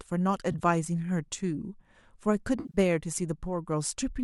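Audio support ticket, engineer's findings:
AAC frame loss with concealment, 0.52–0.61 s: brief smeared, phasey patch scattered across about 80 ms, each gap roughly 20 ms at most. Decoder rebuilding from last good spectrum, so no hard silence or click, unlike a plain dropout.

Same fault, 2.60–2.78 s: heavier, about 120 ms concealed across 140 ms, longest run around 50 ms. Short gaps fit 10 ms frames, likely the low-delay AAC-ELD stream. Decoded audio between losses sounds light on codec damage.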